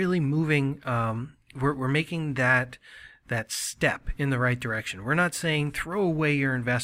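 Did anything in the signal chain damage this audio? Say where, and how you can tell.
No, nothing audible in this speech points to damage at any stage of the chain.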